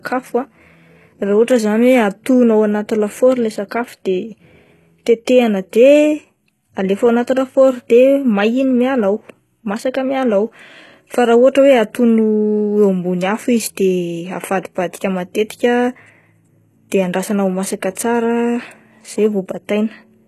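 Throughout the speech, the treble sounds synthetic: s sounds come out gritty and lispy, with a metallic sheen, and nothing is audible above about 12.3 kHz. This is likely HE-AAC compression, heavily degraded at a rate that fits roughly 16 kbps. Only the lower spectrum is truly coded. The top octaves are rebuilt by copying lower bands upward under a coarse envelope, so the upper harmonics no longer line up with the real ones.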